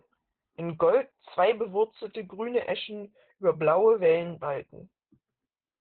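Throughout, Opus voice compression in SILK mode removes everything above 4.4 kHz, which muffles the speech; coarse excitation coding makes it hoarse and robotic, fitting about 8 kbps.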